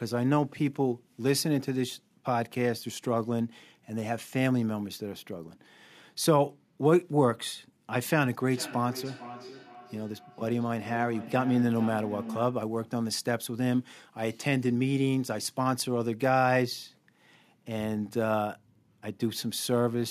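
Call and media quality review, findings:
Speech comes back in thinning, ringing repeats about half a second apart, 8.5–12.7 s, loudest about 14 dB below direct speech. Feedback echo between two devices: second in-room device replays call audio into this mic; local canceller removes only its own playback.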